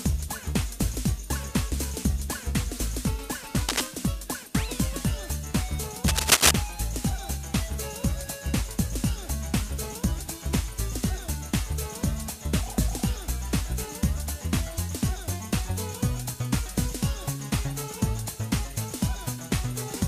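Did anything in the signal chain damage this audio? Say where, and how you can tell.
Yes: scratchy, rustling bursts at 3.69–3.87 s and 6.06–6.51 s are cable scratch noise from the analogue wiring, likely a worn connector's contact resistance fluctuating.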